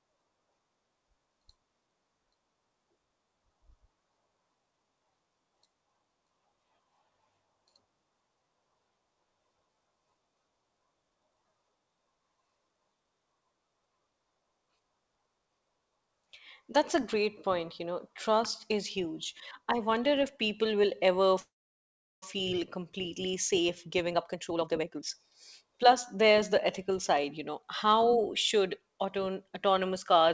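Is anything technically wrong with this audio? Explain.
Yes, there are two faults, both from the call's receiving end.

From 21.40 to 22.24 s there is a call audio freeze. The sound stops, trails off briefly, then goes silent for about 0.72 s. Delayed packets likely emptied the jitter buffer. When they arrived, the sound resumed where it stopped, so nothing is lost.

From 23.60 to 27.14 s there is a jitter buffer speed-up. The buffer had built up extra delay after the freeze. The receiver cut many short pitch-period pieces, roughly 0.7 s in total. The speech runs at 122% speed at the same pitch and sounds hurried.

The audio passes through a G.722 call codec, so nothing above 8 kHz is present.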